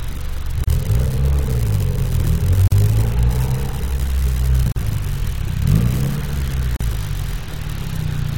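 Separately encoded pieces were joined without trimming each run's start delay and end padding, causing gaps at the joins at 0.64, 2.68, 4.72 and 6.76 s, about every 2 s. The sound drops out for 35 ms, then 43 ms, with smeared edges, and resumes where it stopped.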